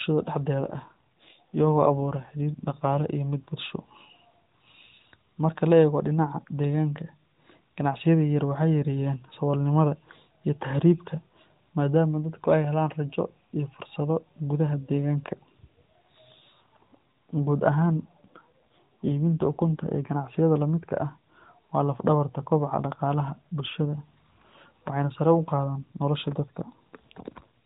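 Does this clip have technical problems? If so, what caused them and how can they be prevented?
Yes. Two AMR rate drops occur, from 0.64 to 3.06 s (ending just before "iyo mid") and from 17.91 to 19.93 s. In each, the speech turns buzzier and more synthetic, consistent with the codec falling from its 12.2 kbps mode to about 5.9 kbps while a weak radio link diverts bits to error protection. Unlike packet loss or a bandwidth switch, there are no gaps and the narrowband 4 kHz ceiling stays the same. Only the texture coarsens. A stronger, more stable radio connection prevents this.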